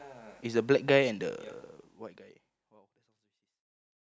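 Nothing is technically wrong with this speech clip, which simply fades out smoothly from around a second and a half to the end, as an editor would do it.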